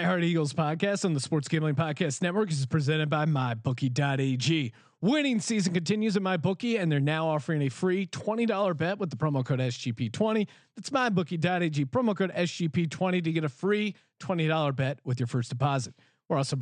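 Nothing in this speech recording gives a listener any technical fault to point to.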